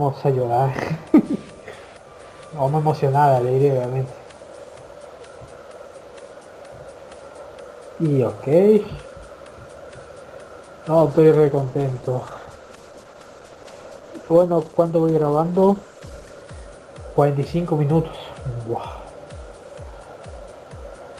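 From 10.97 s to 16.49 s the sound turns rough, watery and muffled, holding its worst quality for about 5.45 s before clearing. This is a call bitrate drop: a falling bandwidth estimate forced the encoder into coarser coding with trimmed high frequencies, consistent with a cut from 48 to 13 kbps.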